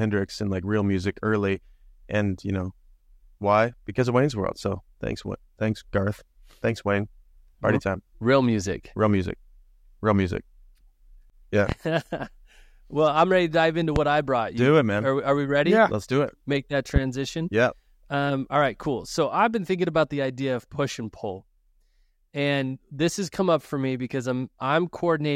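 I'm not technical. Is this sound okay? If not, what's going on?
No, not quite. There are three loud pops in this speech clip: at 11.69 to 11.73 s, at 13.96 to 14.00 s (right after "ready to dive into", just before "I brought you"), and at 16.96 to 17.00 s. Each is a single sharp click, much louder than the talking, while the speech carries on underneath. The likely cause is a sudden electrical jolt, such as a cable being bumped, a switch, or static, getting into the recording.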